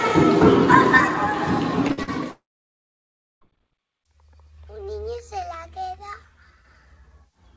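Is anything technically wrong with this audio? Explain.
Yes. There is a cluster of packet-loss damage around 2 s, followed by a dropout of over a second.

Short concealed packet loss occurs twice: from 1.88 to 1.92 s, and from 2.03 to 2.09 s. About 20 ms and then 40 ms of audio failed to reach the decoder in time. The receiver papered over each hole by extending the preceding sound and blending back into the real signal. Each is heard as a brief smear or wobble.

A burst of packet loss runs from 1.92 to 1.99 s, directly after the first short loss. About 60 ms went missing in a row. The receiver kept continuing the last sound and let it fade as the gap went on. The result is a short held buzz or fading hiss. The audio then picks up slightly further along, with that stretch gone.

A long network dropout spans 2.31 to 3.43 s. Roughly 1.1 s of audio never arrived, most likely because the network connection stalled. 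At the start, the last sound is briefly stretched and fades away. Then about 1 s of silence follows. The audio resumes at 3.43 s, skipping everything from the lost stretch. The call path's audio tops out at 8 kHz, which fits a wideband call codec such as G.722.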